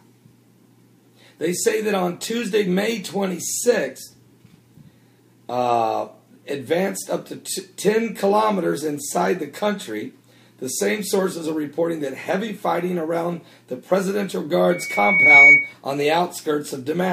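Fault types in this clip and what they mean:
Loudspeaker feedback squeal: the mic is hearing the speaker it drives, and around 2.2 kHz the loop gain tips past one, so that tone keeps feeding itself. You hear it creep in near 14.7 s, swelling over roughly three-quarters of a second into a piercing whistle that ends up about 15 dB above the rest of the sound, then it's gone by about 15.7 s, as if the loop got broken.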